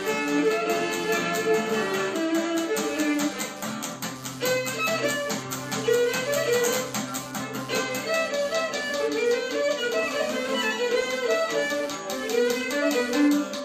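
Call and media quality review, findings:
Pulsed interference under the audio, whole clip, repeating around 100 times per second, roughly 25 dB below the programme. Computer activity noise: load changes in the processor, graphics card or mouse shift the ground shared with the audio circuit. Noise follows the machine's activity, not the recorded sound.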